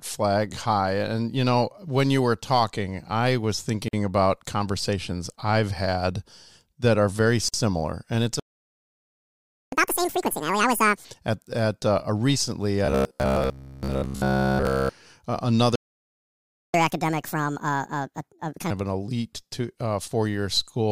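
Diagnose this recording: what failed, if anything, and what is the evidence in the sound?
Two short dropouts in otherwise continuous speech, at 3.88 s and 7.49 s, each about 50 ms (49 and 52 ms). The edges are smeared, and the speech picks up exactly where it left off. That's the classic gap at a join of encoded pieces, a codec-stage problem. Segments were encoded separately and butted together without trimming, so each one's encoder start-up delay and last-frame padding ended up as dead air at the seam.

There are two proper playback stalls, 8.39 to 9.72 s (about 1.3 s) and 15.75 to 16.74 s (just under a second). The speech simply stops mid-flow and goes silent, then resumes. That's much longer than a splice gap and lands in the playback stage. The likely cause is the player's buffer running dry or its thread getting blocked, with output silent until it could recover and feed audio again.

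Right after each stall you get catch-up at higher speed. From 9.72 to 11.05 s the speech runs at double speed, pitched up roughly ten semitones. From 16.74 to 18.71 s it runs at 1.5 times, up about seven semitones. This is the player resampling its backlog faster to win back lost time, which raises speed and pitch together. It's a playback-stage recovery behaviour, not a separate failure.

From 12.86 to 14.89 s the speech turns into a rigid, metallic buzz locked at about 67 Hz, loosely tracking the talking underneath. That's robotic sound from repeated short buffers, at the driver/buffer stage. A 67 Hz buzz fits a chunk of roughly 15 ms being looped. The likely cause is fresh audio arriving too rarely, so the software kept replaying the last buffer, covering most of the stretch, around seventy percent, while real audio was skipped.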